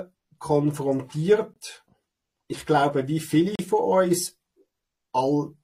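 A gap between stream segments opens at 1.54 to 1.56 s and again at 3.56 to 3.59 s: timestamps of adjacent 2-second segments fail to meet, so the player inserts hard-edged silences of 22 ms and 36 ms, briefly cutting out the sound without losing any of it.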